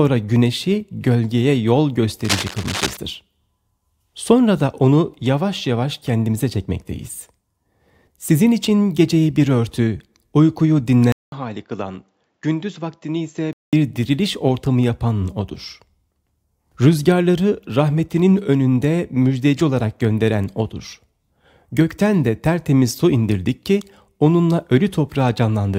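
From 2.24 to 2.97 s the audio carries cable scratch noise: dense, irregular crackling roughly 10 dB below the signal, likely from a worn cable or connector being moved. A spectrogram shows broadband vertical speckles, and the waveform shows spiky, uneven bursts. At 11.12 s, after a 0.2 s gap, the input switched to a poorer device, likely a different microphone. Until 13.73 s nothing reaches above 7.4 kHz, the level drops about 5 dB, and a new noise floor sits about 50 dB down, appearing as a hard ceiling on the spectrogram.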